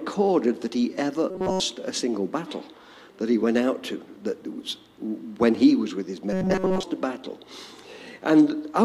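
A rigid, metallic buzz pitched at 188 Hz replaces the sound from 1.30 to 1.60 s, where it is entirely repeated material, and returns from 6.33 to 6.83 s, where most of the passage is repeats. This is robotic sound from repeated short buffers, likely caused by audio arriving too slowly, so a fragment of about 5.3 ms was looped while real audio was skipped. That loop length sets the fixed 188 Hz pitch.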